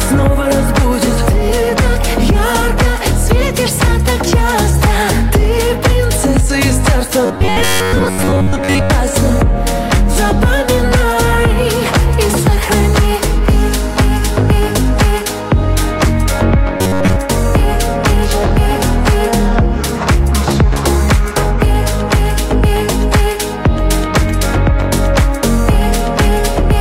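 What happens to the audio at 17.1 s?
At 17.1 s there's robotic sound from repeated short buffers, 16.77 to 17.18 s. It's a rigid 93.8 Hz buzz, likely from an 11 ms chunk looping over most of the audio.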